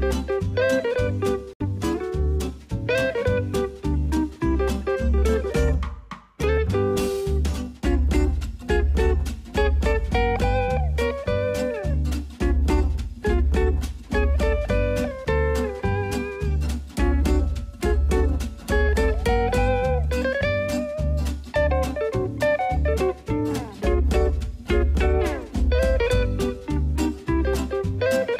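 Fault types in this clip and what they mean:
Bluetooth stall: around 1.53 s the sound drops to silence for 68 ms, then carries on, likely the headphone buffer running dry while delayed packets were resent.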